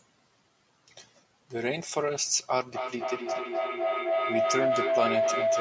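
Feedback howl from 2.71 s to the end of this call-processed speech: a loop between two nearby devices builds a tone near 700 Hz, repeating about every 300 ms and peaking about 2 dB above speech.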